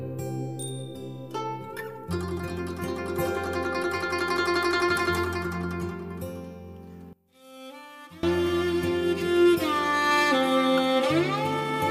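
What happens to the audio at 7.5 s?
One channel inverted, from 7.13 to 8.23 s: the sound drops by about 23 dB and nearly vanishes, background included. The likely cause is a polarity-reversed stereo channel, so shared content cancels in the mono sum, leaving only the channels' small difference.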